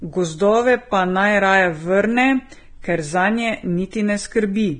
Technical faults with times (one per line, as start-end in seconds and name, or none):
0.00-4.80 Vorbis compression
3.91-3.93 pre-echo